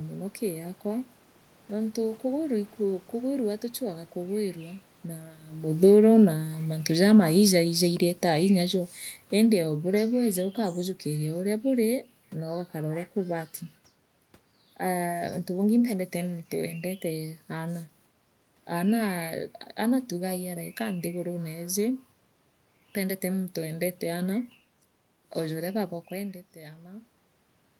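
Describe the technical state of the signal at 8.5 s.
At 8.5 s the signal is in the middle of an automatic gain falling episode that runs from 5.68 to 12.04 s. The gain control judged the input too loud, or its background noise too strong, and is pulling its gain down in a slow ramp, about 10 dB in total, so the speech sinks steadily. What separates this from a talker moving away is that the room noise drops along with the voice, because the whole signal is being turned down.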